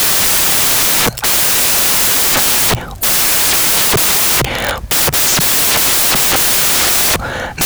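From start to finish, the speech carries loud, harsh noise, close to white on the louder sounds, the signature of samples built from the wrong bytes. Each sample's bytes are being combined out of order or misaligned, so the jittery low bits end up dominating every value.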